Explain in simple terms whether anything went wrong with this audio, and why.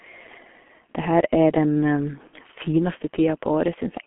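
The whole recording passed through the G.723.1 codec, an early internet-phone format that squeezes speech into very little data and keeps only the band from about 200 Hz to 3.4 kHz. The speech sounds muffled and hoarse, with smeared consonants, throughout.

Around 2.27 to 2.39 s, just after "her er den", there was VoIP packet loss concealed by the speech codec. About 60 ms of audio never arrived, and the decoder filled the gap by stretching what it last heard. The speech briefly turns into a stretched, fading sound, then takes a moment to recover.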